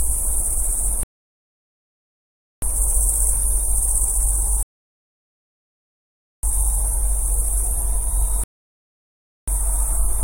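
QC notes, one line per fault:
1.03–2.62 s, 4.63–6.43 s, 8.44–9.48 s: rebuffering stall. Three times the player ran out of downloaded audio and halted until more arrived, so the sound drops to silence for 1.59 s, 1.80 s and 1.04 s, then picks up exactly where it stopped. Nothing is skipped, but the gaps add time.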